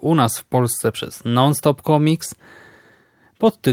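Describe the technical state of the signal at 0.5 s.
At 0.53 to 0.55 s there is a lost packet rebuilt from error correction. The 20 ms span is consistent with a single lost packet. The decoder filled it with the low-bitrate redundant copy carried in the next packet, so there is no dropout. The speech just turns briefly rougher and noisier.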